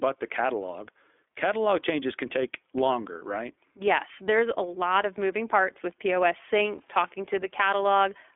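iLBC codec coding runs through the whole clip. Each 20 ms frame's excitation is coded on its own, leaving a band of about 300 Hz to 3.5 kHz. The speech sounds plainly rough and slightly synthetic, which fits iLBC's 15.2 kbps mode.

Lost iLBC frames occur at 6.78 to 6.82 s, consistent with a single missing 20 ms frame. The decoder filled the gap by repeating the last pitch cycle blended with noise, heard as a brief held, buzzy vowel. Normal speech returns immediately afterwards.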